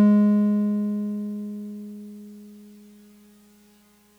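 A short piece of music, with nothing technically wrong anywhere in it. No fault of any kind turns up at any point in the recording.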